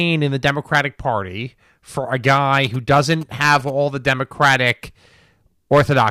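From 2.66 to 3.70 s, GSM signalling bursts intrude under the speech as a galloping dit-dit-dit of short 217 Hz buzzes, roughly 20 dB down. A nearby 2G phone is signalling, and the audio circuitry rectifies its radio bursts into audible interference.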